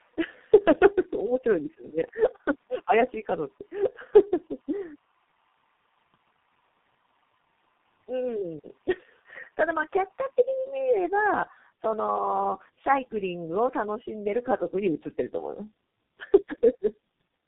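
Speech, with tandem speech coding audible from start to finish. The sound has the rough, muffled, warbling quality of two low-rate speech coders in sequence. The second coder works on the already degraded output of the first, which fits a G.729A link bridged through G.711 A-law into G.723.1 at 6.3 kbit/s. Nothing is present above 3.8 kHz, which confines the audio to narrowband telephone bandwidth.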